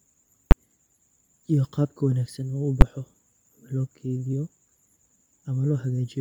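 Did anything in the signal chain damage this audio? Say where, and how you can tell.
Yes. Throughout the speech the upper band sounds breathy and grainy, with sibilants turned to hiss rather than detail. That is heavy codec damage, likely from Bluetooth LC3 compression zeroing the high spectrum and filling it with noise. The noise fill, not swirly pre-echo, fits LC3 at a low rate near 32 kbps with 10 ms frames.

Two very loud single bangs at 0.51 s and 2.81 s point to invalid numbers at full scale, probably in sample-format conversion or a processing stage. Each 10 ms block of infinite or invalid values was forced to the maximum output. A dropout would go silent instead, and clipping would flatten peaks that were already loud.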